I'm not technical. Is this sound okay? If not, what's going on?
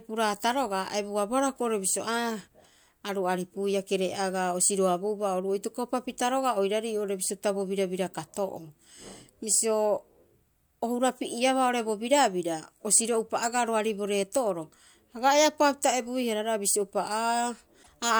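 No. At 17.82 to 17.89 s, likely a broken MP3 bit reservoir: after a cut, frames lost data they had borrowed, so the speech skips ahead with a brief garbled blip.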